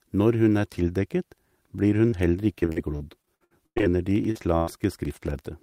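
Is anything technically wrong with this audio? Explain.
Yes, the speech has four kinds of transmission fault.

Short concealed packet loss occurs at 2.09 to 2.14 s and at 4.31 to 4.37 s. Audio arrived too late, so the receiver extended the preceding sound to cover roughly 26 and 40 ms, leaving a brief smear or wobble.

Repeated packet loss (robotic sound) runs from 2.60 to 3.87 s. Twelve separate gaps, the longest 98 ms, were patched one after another, covering about a third of that stretch with choppy speech and missing fragments.

A train of clicks runs from 4.11 s to the end, about 9.4 per second at an uneven pace and roughly as loud as the speech. Electrical interference or a faulty connection or power supply is the likely cause, and the ticking is audible throughout.

A burst of packet loss at 4.56 to 4.69 s dropped about 100 ms in one run. The decoder held and faded the last sound into a buzz or hiss, then resumed with that section gone.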